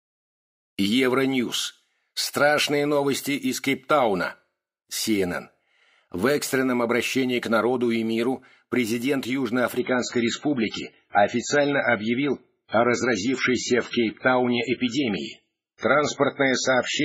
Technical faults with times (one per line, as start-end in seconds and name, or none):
9.79-17.04 adaptive stream at a lower bitrate